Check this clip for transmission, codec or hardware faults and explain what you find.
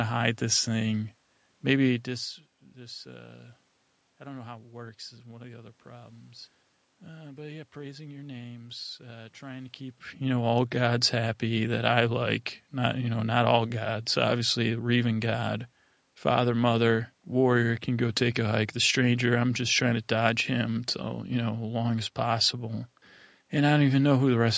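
No transmission, codec or hardware faults turn up in this speech clip.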